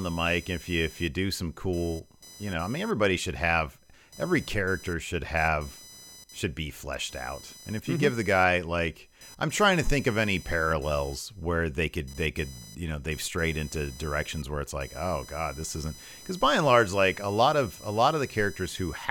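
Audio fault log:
throughout, computer activity noise: a chirping, buzzing whine pulsing at around 1 kHz, roughly 25 dB below the speech, that rises and falls with the computer's processing load rather than with the speech. A mains hum would instead hold steady at a low, fixed pitch.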